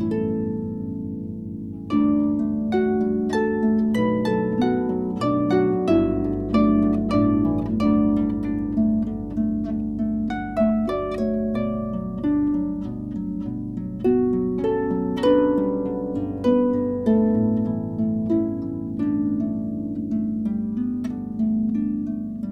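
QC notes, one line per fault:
No faults found on this pass.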